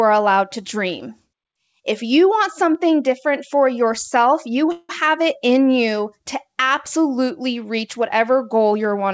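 Speech heard over a G.722 call path, with nothing above 8 kHz. Two sharp clicks, at 2.75 s between "you want" and "different for" and at 4.01 s just after "different for", show as thin vertical lines on a spectrogram and jumps in the waveform. These are dropped samples, likely a fraction of a millisecond lost each time. From 4.72 to 4.91 s a call audio freeze holds the last sound for about 170 ms as a fading buzz or hiss, visible as a smeared horizontal stretch. The likely cause is a jitter buffer running empty, and the audio then resumes where it stopped with nothing missing.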